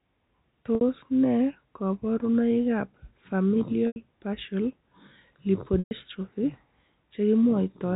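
Three dropouts show up as packet loss with pitch repetition, at 0.75 s (60 ms), 3.87 s (90 ms) and 5.79 s (120 ms). Each time, the receiver loops the last pitch period, which gives a brief buzzy hold. It fades out over roughly 50 ms, so the longer two sink into a short silence before the sound cross-fades back in, all over the narrow G.711 phone band.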